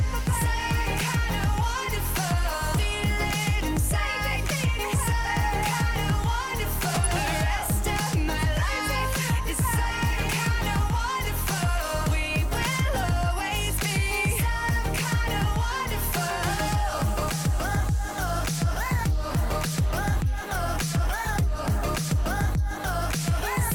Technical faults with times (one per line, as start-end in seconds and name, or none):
6.89-7.14 DAB burbling